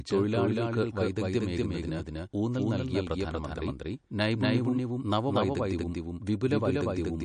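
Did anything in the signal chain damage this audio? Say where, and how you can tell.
Yes. A doubled audio track runs throughout: a second full-band copy of roughly equal level trails by around 200 ms, likely from a slower second capture path or an edit holding two copies out of step. A spectrogram shows every onset repeated a fifth of a second later, with no decay.

MP3 compression at the codec stage is plainly audible throughout, with a watery or swirly texture and smeared attacks, likely from a bitrate around 40 kbps. A spectrogram shows a hard ceiling at 9.6 kHz and weak high components flickering on and off from frame to frame.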